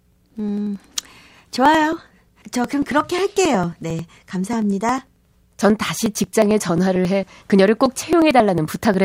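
A recurring driver or USB stall skips roughly 10 ms of speech every 0.09 s from 0.12 to 8.94 s: periodic USB or driver dropouts heard as steady ticking.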